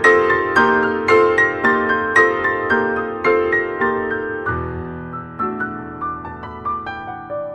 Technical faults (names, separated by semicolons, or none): none